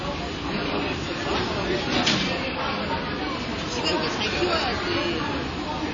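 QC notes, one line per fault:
Throughout: WMA compression is the likely cause. Nothing survives above 7.3 kHz, so the sound is capped and dull, with a ringing, washy smear around events and a hiss that swells and fades with the signal. Long transform blocks spread quantisation error over tens of milliseconds and zero weak components, which fits a low bitrate near 32 kbps. A spectrogram shows a hard ceiling at 7.3 kHz and speckled gaps, and the waveform shows smeared onsets.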